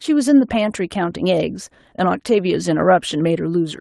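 The speech comes through without technical faults, carrying only the ordinary character of a call codec path, with the top end rolled off at around 12 kHz, which fits a super-wideband Opus setting.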